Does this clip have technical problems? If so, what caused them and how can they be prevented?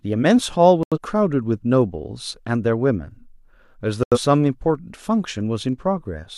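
Yes. The speech has two digital broadcast dropouts, at 0.83 to 0.98 s and 4.03 to 4.17 s. Each time, the receiver lost good frames and muted. Each gap fits about two lost frames. A stronger, steadier signal would prevent this.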